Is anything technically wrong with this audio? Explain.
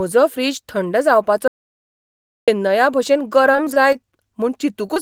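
Yes, there are three kinds of fault in this speech clip.

Audio dropout to silence, from 1.48 to 2.48 s: the input signal was lost for almost exactly one second, likely through a momentary disconnection or mute upstream, while recording carried on writing silence. The speech stops abruptly and restarts just as suddenly. In between there is dead silence with no room tone at all, and whatever was said during that second is simply gone.

Repeated packet loss (robotic sound), from 3.51 to 3.96 s: over this stretch of just under half a second, the stream lost data again and again, in what sounds like five separate gaps, the longest about 22 ms. Each hole was patched by extending the preceding sound, so roughly a fifth of the span is synthesized filler rather than real audio. The speech turns choppy, with small pieces missing.

Short concealed packet loss, at 4.86 to 4.90 s and again at 4.94 to 4.98 s: two brief losses of about 20 ms each reached the decoder too late, and the receiver bridged each by continuing the last sound before blending back into the incoming audio. 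Each one is heard as a quick smear or wobble.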